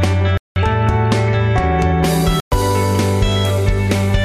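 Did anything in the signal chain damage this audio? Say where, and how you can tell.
Yes, there are two dropouts at the playback end. The sound cuts to dead silence from 0.38 to 0.56 s, roughly 190 ms, and again from 2.4 to 2.52 s, about 120 ms, then resumes. That points to a Bluetooth stall as the likely cause: radio interference delayed packets, the headphones' buffer drained, and playback simply paused until the retransmitted audio showed up.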